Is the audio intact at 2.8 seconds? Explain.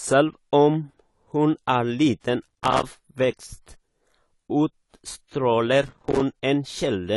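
No. At 2.8 seconds you're inside a burst of processor overload crackle running from 2.43 to 2.86 s. The processor kept missing its deadlines on tiny buffers of a few milliseconds, dozens of times, and each miss dropped in a hard-edged gap of silence. Together they form a gritty crackle over the speech.

Underneath that, the whole clip sounds dull and smeared, with nothing above 11.5 kHz and plainly audible codec damage. That's likely AAC compression, and the amount of damage fits a low bitrate of around 32 kbps.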